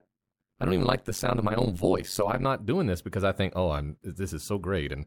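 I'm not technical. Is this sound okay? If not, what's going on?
No. From the start to about 2.46 s, just before "doing this because I", the speech has an overlap-add ripple. The processing chopped the sound into short overlapping slices and glued them back together, but the overlaps don't add up evenly, so the loudness pumps up and down once per slice, about a hundred times a second. The swings are very deep, which gives the speech a rough, buzzy, robotic flutter.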